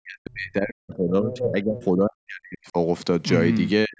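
From the start to 2.77 s the talker's speech sinks, falling by roughly 40 dB at its deepest. This is speech suppressed in double talk, likely because the echo canceller heard both sides at once and turned everything down. Unlike a plain network dropout, the loss tracks the overlap and dips unevenly rather than cutting cleanly. Between 1.31 and 1.46 s the other side's voice leaks through, about 10 dB below the talker, as a brief scrap. That is likely residual loudspeaker echo the canceller failed to remove, not a second person near the microphone. From 3.85 s to the end the suppression returns, briefly pulling the speech down by around 35 dB.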